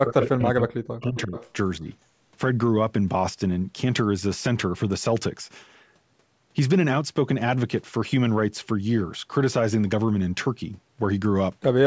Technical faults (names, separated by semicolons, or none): speech suppressed in double talk; echo leak